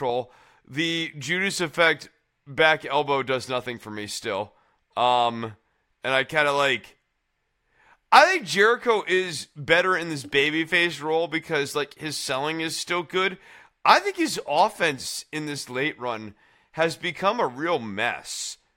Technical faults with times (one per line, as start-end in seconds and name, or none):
none